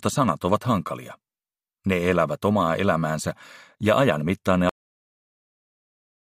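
The sound has a cut-off end. At 4.69 s it stops mid-sound and drops straight to digital silence for the remaining 1.6 s, as though the final buffers were never written. Unlike a fade-out or a natural ending, there is no decay or tail.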